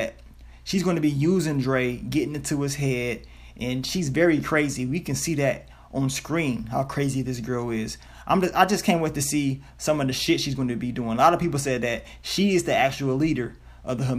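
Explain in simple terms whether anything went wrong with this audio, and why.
Nothing went wrong here.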